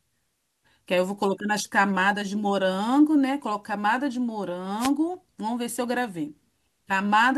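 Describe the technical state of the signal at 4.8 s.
The analogue FM radio link fades as reflections cancel, so receiver noise surges: a wireless microphone noise hit from 4.79 to 4.90 s, heard as a brief swish of static over the speech.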